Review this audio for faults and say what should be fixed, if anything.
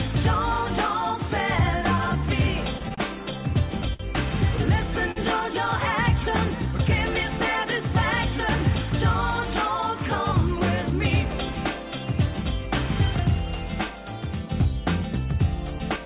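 Repeated stalls (stutter) run from 2.78 to 4.01 s. Packets reached the receiver late or too slowly, so its jitter buffer emptied four times and it filled the gaps by continuing the last sound. The fills total 133 ms, about 11% of that stretch, with the longest at 59 ms, and nothing is lost. The audio drags and stutters. On a spectrogram, the harmonics freeze into flat horizontal bands at each gap. On the waveform, the same cycle repeats, and the longer fills fade in level. A larger or adaptive jitter buffer that absorbs this network jitter would prevent it.

A short stall from a late packet occurs at 5.11 to 5.18 s. One packet missed its playout time, so the receiver stretched the preceding sound by 46 ms until the packet arrived, then resumed exactly where it had stopped. The network delay had jumped by 46 ms. The held sound carries a slight buzz or dip. A spectrogram shows a brief smeared, static patch, and the waveform shows copied periods with a small amplitude sag. 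Enough buffer headroom to ride out single late packets would prevent it.

Jitter buffer speed-up happens twice: at 10.56 to 11.33 s, with playback at 105% speed, and at 15.43 to 16.06 s, at 107%. Each time the buffer held more audio than its target, so the receiver cut pitch-period-sized slices, roughly 50 ms in total per stretch, to catch up. The sound runs hurried at an unchanged pitch. A spectrogram shows events slightly squeezed in time with the harmonic spacing intact, and the waveform has periods spliced out. Smoother packet delivery, so the buffer rarely overfills, would prevent it.

Nothing above 4 kHz survives the call path, which fits a narrowband G.711-style codec.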